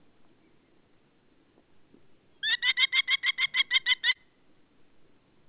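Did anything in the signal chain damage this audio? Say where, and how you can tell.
Yes. There are two brief smears in the sound, at 2.70 to 2.74 s and at 4.12 to 4.17 s, where the signal wobbles and loses definition before blending back. This is short concealed packet loss on the network leg of the call. About 20 ms and then about 40 ms of audio arrived too late for the jitter buffer. The decoder bridged each gap by extending the preceding sound and crossfading back into the real signal. The G.711 mu-law path's cutoff at 4 kHz is present throughout.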